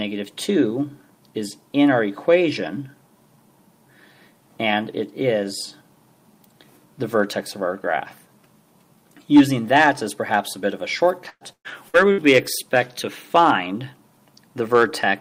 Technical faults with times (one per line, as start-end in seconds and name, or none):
11.29-12.21 repeated packet loss (robotic sound)